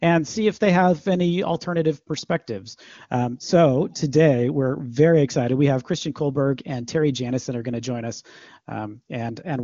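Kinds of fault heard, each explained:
No faults can be heard in this speech clip. The audio has passed through the AMR wideband (HD Voice) codec at what sounds like its highest rate, around 23.85 kbit/s, so any coding roughness is faint at most, and there is nothing above about 7.3 kHz, as expected for wideband telephony.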